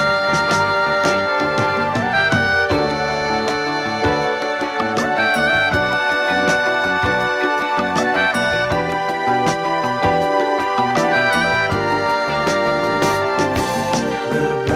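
Nothing is technically wrong with this clip.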